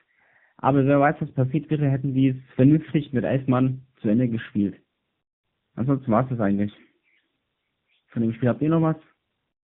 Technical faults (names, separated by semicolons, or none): tandem speech coding